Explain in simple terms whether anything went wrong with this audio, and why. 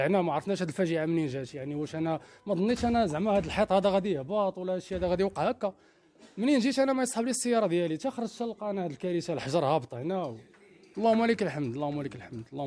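Nothing went wrong with the signal itself: no dropouts, glitches or other technical faults can be heard anywhere in the recording.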